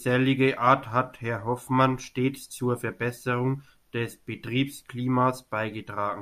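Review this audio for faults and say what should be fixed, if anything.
No faults can be heard; nothing needs fixing.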